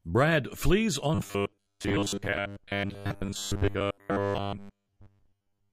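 Audio buffers likely arrived too seldom from 1.15 s to the end, so short chunks repeated, giving robotic sound from repeated short buffers: a rigid 100 Hz metallic buzz, roughly 70% repeated.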